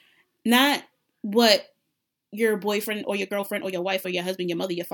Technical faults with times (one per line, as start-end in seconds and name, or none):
2.80-4.93 time-stretched section